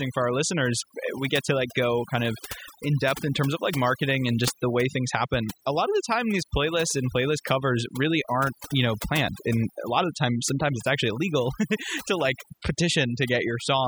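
From start to finish, the speech carries the marks of overdone noise removal. A noise reduction stage was pushed too hard on a noisy recording. Frequency bands that sat close to its noise estimate were cut deeply or shut off. Softer parts of the voice fell below that line and were removed too. Between phrases the background drops to near silence, dotted with twinkling specks.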